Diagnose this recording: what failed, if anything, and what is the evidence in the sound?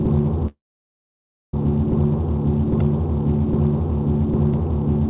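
Call audio freeze, 0.47 to 1.54 s, network and jitter buffer stage: the sound stalls, then goes silent for 0.95 s within the band-limited, 4 kHz call audio, and resumes where it stopped, likely from delayed packets.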